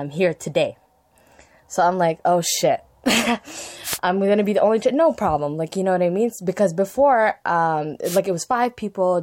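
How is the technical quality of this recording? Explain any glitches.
The recording has two brief wireless microphone noise hits. The first runs from 3.83 to 3.99 s. The second runs from 8.04 to 8.20 s, just after "before um". Each lasts about 0.16 s. The radio link from an analogue FM microphone dropped as reflected signals cancelled the direct one. With the carrier weakened, the receiver's own noise rose over the speech. Each hit is heard as a short swish of static.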